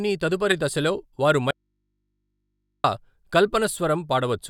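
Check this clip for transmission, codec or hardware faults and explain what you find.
Two faults are audible in the speech: one damaged codec frame early on, then a longer loss of signal in which only hum remains.

From 0.50 to 0.53 s a corrupt frame was decoded. One compressed frame arrived with flipped bits and was played anyway, so misread gains and codes put energy where none belonged. It comes across as a short, harsh blip peaking near -10 dBFS. On a spectrogram it shows as a thin vertical smear of misplaced energy one frame wide. The waveform shows a brief spike that breaks the speech envelope.

From 1.51 to 2.84 s there is an audio dropout to a faint residue lasting about 1.33 s. The speech stops abruptly mid-flow and returns just as suddenly. The likely cause is that the signal feed was lost while the path after the break stayed live. What remains is mains hum, roughly 55 dB below the speech. 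On a spectrogram this appears as a gap with steady low-frequency hum lines running through it. The waveform collapses to a near-flat trace with sharp edges.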